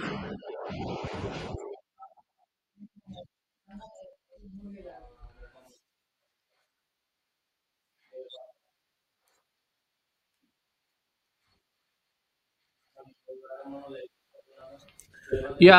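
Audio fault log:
3.77–4.31 s, CD scratch ticks: four short ticks at a steady spacing, roughly seven per second, the longest about 1.5 ms. A blemish on the disc passes under the laser once per revolution and destroys more data than error correction can rebuild, so the player patches over the gap. The even rhythm locked to disc rotation distinguishes this from random crackle or digital clicks.
14.43–15.15 s, CD scratch ticks: five more ticks at the same roughly seven-per-second rate, the longest a few milliseconds, so brief dropouts rather than pure clicks. They arrive at regular intervals, unlike network packet loss or buffer underruns.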